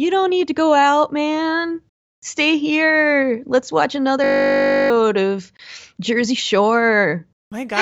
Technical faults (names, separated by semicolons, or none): system hang loop